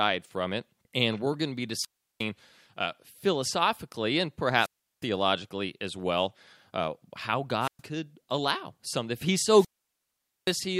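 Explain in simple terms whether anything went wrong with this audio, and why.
Yes, the speech keeps cutting out. That's wireless microphone squelch dropout: the radio link weakens, the receiver hears mostly static and shuts itself off. It happens at 1.76, 4.57, 7.60 and 9.47 s, muting for about 0.36, 0.36, 0.12 and 0.83 s.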